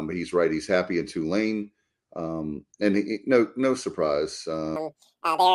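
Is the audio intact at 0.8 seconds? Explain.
Yes, the speech at 0.8 seconds plays through cleanly, with no dropout, click, distortion or other fault at that moment.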